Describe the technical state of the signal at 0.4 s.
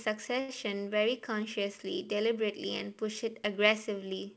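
At 0.40 s a short stall from a late packet begins, lasting until 0.50 s. The jitter buffer ran empty, so the receiver stretched the preceding sound for 86 ms until the packet arrived, then resumed. Nothing is lost, but the sound is held too long, and everything after runs 86 ms late.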